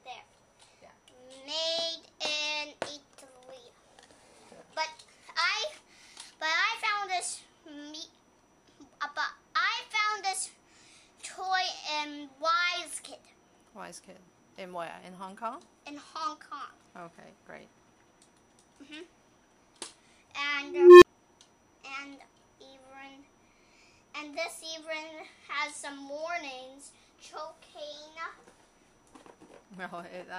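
A recursive filter goes unstable at 20.61 s, its output running away: a tone around 400 Hz swells for 0.41 s into clipping, then cuts to 29 ms of silence at 21.05 s.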